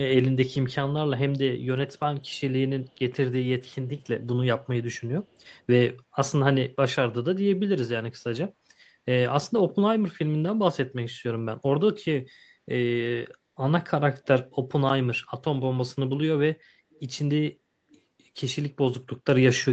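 Echo leak appears in this speech recording at 2.2–2.4 s, 2.87–2.98 s, 4.02–4.06 s, 5.23–5.59 s and 16.93–17.0 s: faint copies of the speech trailing the original by about 266 ms, very quiet at around 40 dB down, rising to about 35 dB down in the last scrap. The likely cause is a far-end loudspeaker whose echo canceller let some residual pickup through and returned it. Across the clip the call path's band limit stops the audio near 8 kHz.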